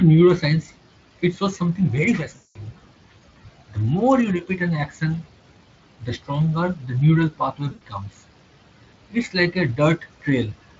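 At 2.35 to 2.57 s and again at 7.71 to 7.83 s, VoIP packet loss concealed by the speech codec shows up: rather than silence, the Speex decoder extends its last pitch and filter into a sound that fades out, and the speech stays weak briefly after resuming, unlike a clean dropout.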